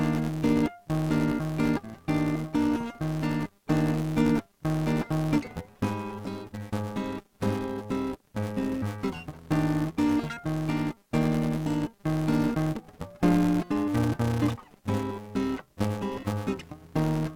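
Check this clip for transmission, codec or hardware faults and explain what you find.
One fault runs through the whole music clip: filter restarted on every block. The filter drops its state and starts each block from silence. Each restart leaves a small transient, heard as a 200 Hz buzz that tracks the music's level, which fits a block every 5 ms.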